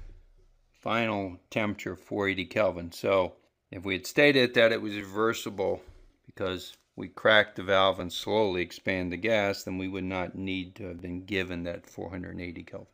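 At 5.01, 8.0 and 10.99 s the sound skips ahead by a few milliseconds, every 3 s with no silent gap, likely audio missing between chunks rather than random dropouts.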